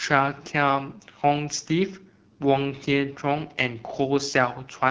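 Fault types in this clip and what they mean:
AMR wideband (HD Voice) codec: The speech sounds rough and raspy throughout, with a buzzy, synthetic edge and a thin hiss at the very top. This fits AMR-WB at one of its lowest rates, around 8.85 kbit/s, where the pulse-driven vocal tract model runs short of bits.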